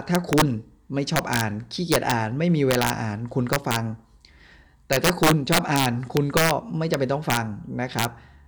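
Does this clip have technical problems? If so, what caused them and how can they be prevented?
Yes. Integer overflow runs through the speech: the signal is driven about 6 dB past full scale, so the loudest peaks, roughly half a percent of samples, wrap to the opposite sign instead of limiting. Each wrap is a harsh crack. On the waveform, peaks jump from top rail to bottom. The spectrogram shows thin broadband vertical streaks. Prevent it by using saturating arithmetic or a limiter before the integer conversion.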